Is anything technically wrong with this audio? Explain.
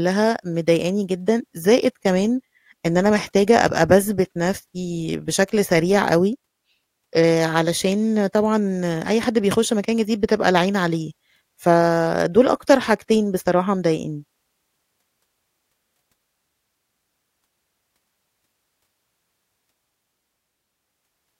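No, nothing is technically wrong.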